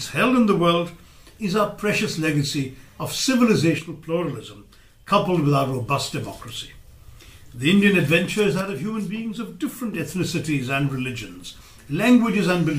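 The audio drops abruptly by about 6 dB from 3.79 to 5.09 s and from 8.61 to 9.93 s, likely one channel drops out before the mono sum.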